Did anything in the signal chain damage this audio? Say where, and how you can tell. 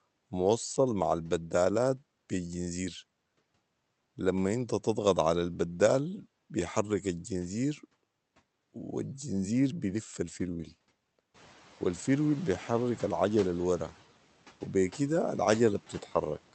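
Yes: in call processing, the noise suppressor cut speech it took for noise from 16.01 to 16.14 s, dropping it about 7 dB, so that stretch sounds swallowed and faint.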